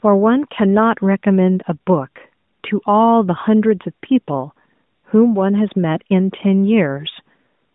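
No technical faults are present in the speech, and nothing in the recording calls for attention.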